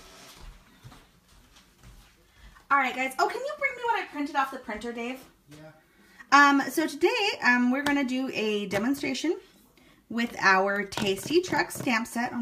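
At 10.76 s a single sharp snap sits on top of the sound, arriving and vanishing almost instantly and peaking at around -25 dBFS. This is an electrical switching spike, likely from a nearby switch, motor or static discharge arcing briefly and coupling into the audio line. On the waveform it shows as a thin, isolated vertical stroke; on a spectrogram, as a narrow vertical line spanning nearly the full frequency range.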